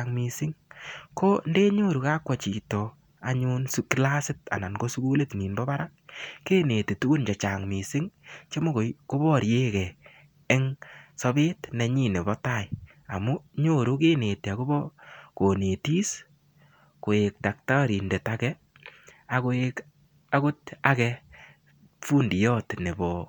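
No technical faults can be heard anywhere in this speech recording, so there is nothing to describe in time order.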